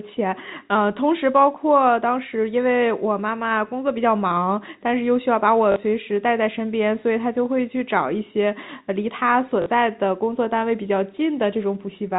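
At 5.72 to 5.76 s and again at 9.62 to 9.66 s, packet loss with the last packet repeated fills a 40 ms gap, which fits two lost 20 ms packets. Each replay makes the speech stutter briefly with a robotic buzz, over a G.711 telephone band that stops at 4 kHz.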